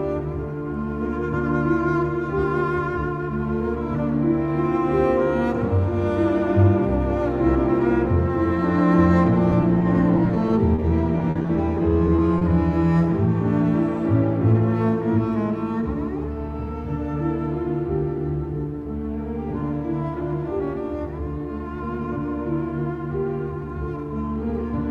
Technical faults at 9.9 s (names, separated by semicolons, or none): repeated packet loss (robotic sound)